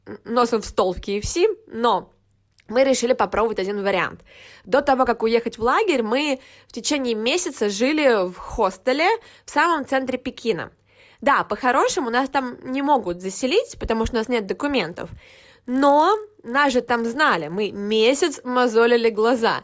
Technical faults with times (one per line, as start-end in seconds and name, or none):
14.84-18.28 resampler restarted on every block